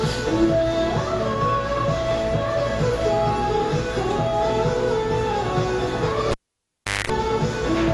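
Likely AAC compression runs through the whole recording: the encoder is starved of bits, consistent with a low bitrate around 32 kbps, so it drops everything above 11.5 kHz and coarsely quantises the rest. The everyday sounds come out dull and smeared, with plainly audible fizzy, warbling damage.

From 6.31 to 7.10 s, a cable pulled and plugged in breaks the signal path. A pop starts about 0.74 s of near silence, then roughly 0.21 s of 50 Hz mains buzz while only the tip touches, and a second pop as the sound returns.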